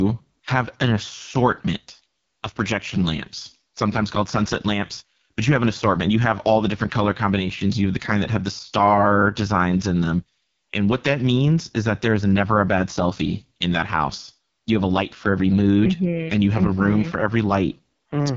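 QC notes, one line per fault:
Throughout: AMR wideband (HD Voice) codec damage, heavy. The speech sounds rough and raspy. This fits the codec's lowest rate, around 6.6 kbit/s, where the pulse-driven vocal tract model has too few bits to follow the voice closely. Nothing sounds above about 7.3 kHz, and the top band is hissy filler rather than true detail. That wideband ceiling, together with the raspiness, separates it from narrowband telephone coding.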